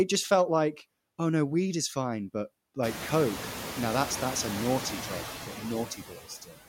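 Across the whole clip the background sinks between phrases and swells back under them. These are noise suppressor artifacts: the suppressor pulls down the bands it judges to be steady noise by about 16 dB, frame by frame, and that gain keeps shifting as the sound comes and goes. The effect grows more noticeable once the room noise climbs by about 23 dB around 3 s, sitting about 12 dB below the speech.

From 5.90 s to 6.67 s, the final stretch sounds swallowed and faint, with soft parts fading into the hush. This is speech cut by the noise suppressor: it mistook about half a second of quiet speech for noise and turned it down with the background, by as much as about 21 dB.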